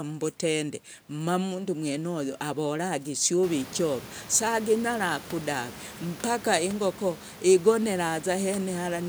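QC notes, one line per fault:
No faults are present in this speech clip. Room noise rises by about 16 dB at roughly three and a half seconds and then stays about 18 dB below the speech, which is the acoustic background of the recording space rather than a system fault.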